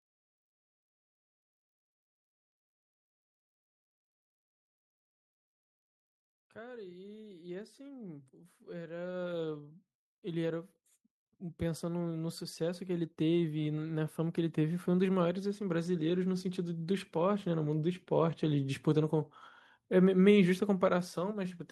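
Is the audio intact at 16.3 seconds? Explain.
No. At 16.3 s the automatic gain rising is still under way: between 11.39 and 17.03 s the level control lifts its gain by about 11 dB, so speech and background swell together.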